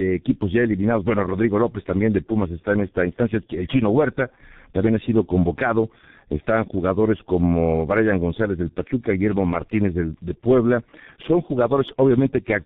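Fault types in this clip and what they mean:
tandem speech coding: The call passed through two low-rate speech coders in a row, with a plain telephone-grade link between them, so the speech was decoded and squeezed again by a second coder working on the first one's already damaged output. The result is rougher, more muffled and more warbly than a single pass. Nothing is heard above 3.8 kHz, and the rough, warbly texture fits a coder running at around 6 kbit/s.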